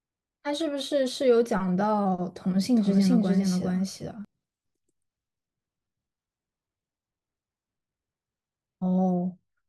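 From 2.77 to 4.25 s the speech carries a doubled audio track: an identical full-band copy trails roughly 400 ms behind at about equal loudness, likely from a second, slower capture path. Unlike an echo, it has no decay or room colour and starts and stops abruptly.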